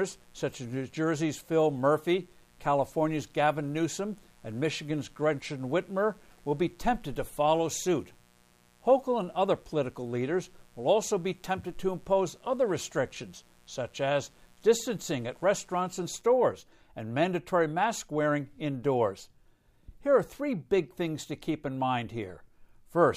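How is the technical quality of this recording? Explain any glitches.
The recording carries a mains buzz from the start to about 16.2 s. Mains buzz, 0.0 to 16.2 s: interference from the power supply, likely a dimmer, a rectifier or poor shielding, injects sharp switching spikes twice per 60 Hz cycle, so harmonics of 60 Hz stack up well into the kilohertz range. It sits well below the speech, around 35 dB down, but is audible as a steady, raspy buzz under the talking until it stops at 16.2 s.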